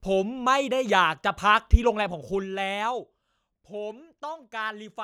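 Speech, with zipper noise from 2.01 to 3.13 s. The level drops by about 10 dB in unsmoothed 1 dB steps, roughly ten per second, and each jump clicks, so a faint ticking rides on the speech. A waveform shows a staircase envelope, and a spectrogram shows thin vertical lines at each step.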